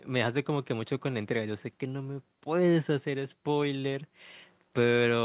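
Speech heard through a narrowband call path with nothing above 4 kHz, which points to a G.711 mu-law link, and no technical faults present.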